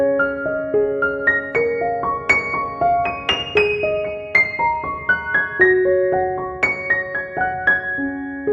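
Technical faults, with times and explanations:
No technical faults can be heard in this clip.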